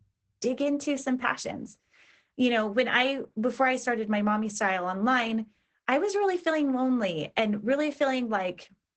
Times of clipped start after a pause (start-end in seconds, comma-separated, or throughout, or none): none